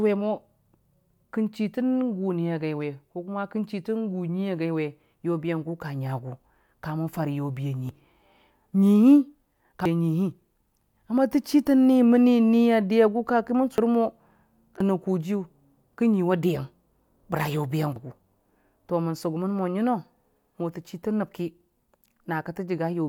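The speech jumps forward at 7.89, 9.86, 13.78, 14.80 (just before "kojiyʊ kə") and 17.96 s. These are compressed frames skipped: whole 85.3 ms frames were never decoded, dropping roughly a third of a second, then over half a second, a brief fraction, and about half a second twice. A spectrogram shows an abrupt vertical discontinuity in the harmonic pattern, and the waveform shows no gap.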